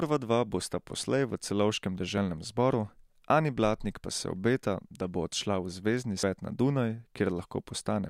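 At 2.18 s the speech jumps forward as a short stretch, around 40 ms, goes missing, and at 6.23 s a longer piece, roughly 150 ms, vanishes. Both are likely a dropped buffer (overrun), where samples were overwritten before being read and the remaining audio was spliced together. On a waveform each shows as an abrupt discontinuity with no gap, and a spectrogram shows a thin vertical broadband line where the harmonics break off.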